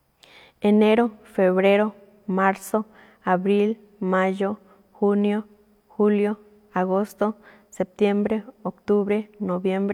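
No technical faults are audible anywhere in this speech recording.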